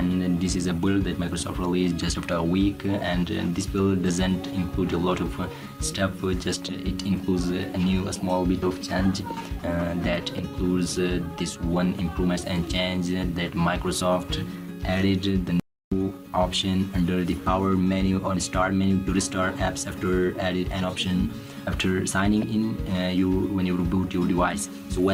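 At 15.60 s the sound drops out to dead silence until 15.92 s, about a third of a second with no room tone at all. That's an audio dropout to silence, likely a brief loss of the input while the recorder kept writing silence, so whatever happened there is simply gone.

Right near the end, from 24.81 to 24.84 s, there's a corrupt frame decoded: a couple of damaged compressed frames were played anyway, putting energy at the wrong frequencies. It comes out as a short, faint glitch peaking around -40 dBFS.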